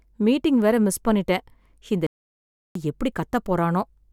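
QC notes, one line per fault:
2.07–2.75 s, playback stall: the speech stops dead mid-flow and the output stays silent for about 0.69 s before picking up again. This is likely the player running out of buffered data or its thread being blocked, leaving nothing to send to the output until it recovered.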